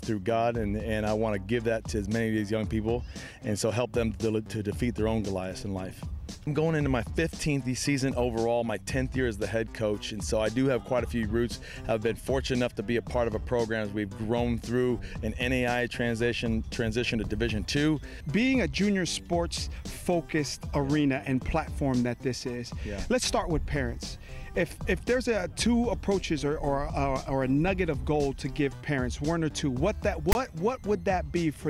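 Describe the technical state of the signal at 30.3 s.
At 30.32 to 30.35 s, file tags played as audio: text metadata decoded as samples gives a hard-edged, one-sided rasp, then silence where the zero padding is read.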